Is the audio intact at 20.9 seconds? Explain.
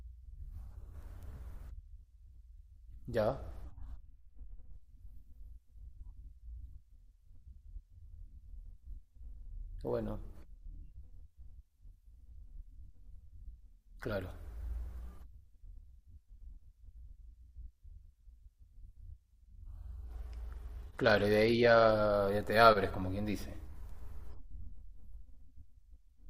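No. From 20.04 to 21.91 s the speech turns dull and gritty, its treble dulled. This is a Bluetooth SBC bit pool drop: the link likely congested, and the sound fits the bit pool falling from 28 to 12, near 96 kbps, starving the top sub-bands.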